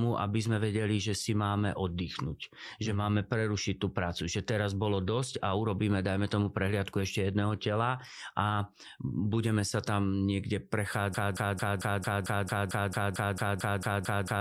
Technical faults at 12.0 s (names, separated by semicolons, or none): broken-record loop